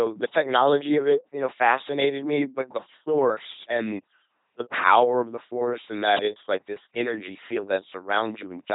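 A speech clip, heavily damaged by an LPC-10 vocoder from start to finish. Each moment is rebuilt as either a pulse buzz or noise through a short filter. The result is a mechanical robot voice, with stray buzz or hiss. Nothing remains above 3.8 kHz. The sound fits a 2.4 kbit/s coder.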